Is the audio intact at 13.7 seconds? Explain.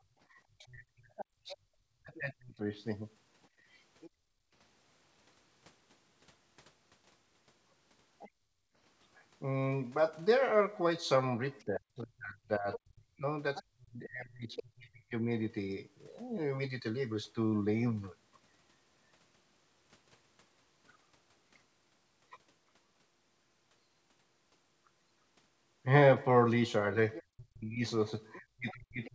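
No. From 11.59 to 14.63 s the other side's voice leaks through: a second voice sits roughly 10 dB below the talker. The likely cause is loudspeaker playback reaching the microphone that the echo canceller did not fully remove.

Between 11.65 and 15.26 s there is also speech suppressed in double talk. The talker's voice dips and drops out in pieces, falling as much as around 40 dB, for about three seconds in total. This likely comes from the canceller attenuating both voices when it could not tell them apart.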